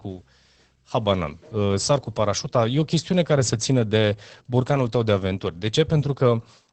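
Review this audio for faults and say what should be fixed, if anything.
Opus voice compression at a low bitrate, likely around 12 kbps with SILK linear prediction, throughout: nothing above 8.4 kHz, leaving the speech muffled, hoarse and slightly robotic. To prevent it, encode at a higher Opus bitrate, or keep an uncompressed master for review.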